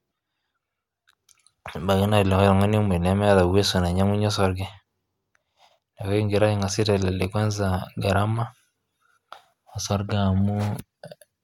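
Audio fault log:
No faults detected in this speech recording.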